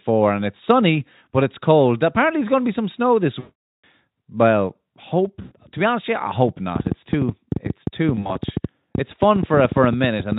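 From 3.39 to 3.84 s, VoIP packet loss concealed by the speech codec replaces about 440 ms of speech with stretched, synthetic sound that weakens as it goes. The decoder keeps repeating its last pitch and filter at falling gain, which fits a run of 20 ms frames. A shorter 100 ms loss follows at 5.41 to 5.52 s. Between 8.15 and 8.37 s, about 80 ms drops out in scattered pieces of up to 40 ms. On a spectrogram each gap shows smeared, frozen harmonics dimming frame by frame, and the waveform shows a repeating pattern that tapers off.

From 6.76 to 10.33 s, a train of clicks ticks over both the speech and the pauses. There are roughly forty of them at an uneven rate of about 9.5 per second, peaking somewhere around 10 dB above the signal, likely from nearby interference or a faulty connection or power supply. The waveform shows thin, similar spikes, and the spectrogram shows narrow vertical broadband lines at irregular spacing.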